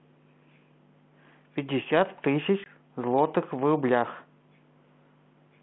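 At 2.64 s, packet loss on an ADPCM call cuts a hard-edged 20 ms hole into the speech, about one packet. Unlike a plain dropout, the return is slightly distorted, because the decoder's predictor and step size lost track of the sender's, settling within some tens of milliseconds after the hole ends at about 2.69 s.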